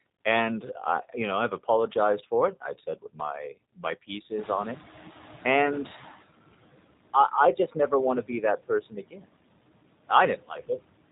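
Noise suppressor artifacts run through this whole speech recording. The suppressor pulls down the bands it judges to be steady noise by about 19 dB, frame by frame, so the background sinks in the gaps and swells back under the talker. The room noise climbs by about 14 dB around 4.5 s and then sits about 16 dB below the speech. G.729 codec damage is also present from start to finish and is plainly audible. At 8 kbit/s the codec rebuilds each 10 ms frame from a vocal tract filter, a pitch predictor and a handful of pulses, and it discards everything above 4 kHz. The result is band-limited, slightly rough and synthetic speech, and the suppressed noise warbles further through the model. Speech cut by the noise suppressor occurs at 7.56 to 7.92 s, 8.22 to 9.29 s and 10.36 to 10.8 s. In these spans the suppressor mistook parts of the speech for noise and turned them down with the background, by about 15 dB in the first and last spans and about 21 dB in the middle one. 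Only short fragments are hit, roughly a tenth of a second each in the outer spans and under half a second in the middle, so the affected speech comes out swallowed or faint.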